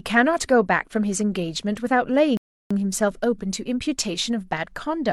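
At about 2.37 s the speech drops into silence and stays there until roughly 2.71 s, a rebuffering stall. The player simply ran dry of downloaded audio and had to wait for more to arrive before carrying on. When it picks back up, it continues from exactly the point where it stopped, so nothing gets skipped. The only cost is the gap itself, which pads the clip out by about a third of a second.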